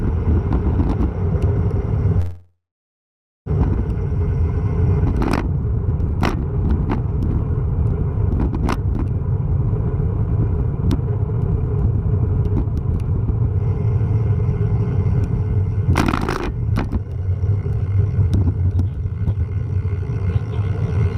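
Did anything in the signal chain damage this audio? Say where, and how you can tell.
Yes. From 2.19 to 3.48 s the sound stalls: the last fragment is stretched into a fading buzz or hiss that drops to silence for 0.88 s, then resumes where it stopped. This is likely a call audio freeze at the network and jitter-buffer stage, adding 1.27 s of delay.

Later the audio runs faster at unchanged pitch: 4% fast from 10.35 to 12.08 s (about 70 ms trimmed), then 14% fast from 12.75 s to the end (roughly a second). This is jitter buffer speed-up, cutting pitch-period slices to shed the built-up delay.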